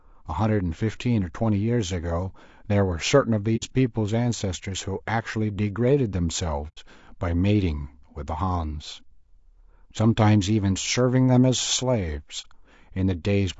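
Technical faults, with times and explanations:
Throughout: low-delay AAC compression. The speech sounds rough and grainy, with a hiss filling the gaps between voice harmonics and an upper band that sounds thin and artificial. This is likely AAC-ELD, the low-delay codec used for video calls, running at a bitrate around 32 kbps. Its short frames cannot resolve pitch harmonics cleanly. On a spectrogram the harmonic stripes look smeared, with speckled noise between them and a blocky, patchy top band.
3.56–3.64 s, 6.68–6.79 s, 12.41–12.46 s: AAC frame loss with muting. The sound drops into brief soft-edged gaps, losing about 60 ms, 90 ms and 30 ms of audio. These fit two, three and one lost frames. The decoder zeroed the missing spectrum, and its overlapping windows fade the sound out and back in. A waveform shows a smooth taper to silence and back. A spectrogram shows a clean vertical blank across all frequencies.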